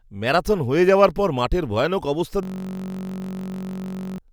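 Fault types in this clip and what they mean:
System hang loop: after "পর মাঠের ভয়ানক অবস্থা" the computer or driver freezes and a 21.33 ms slice repeats at 46.9 Hz, a buzz for about 1.7 seconds.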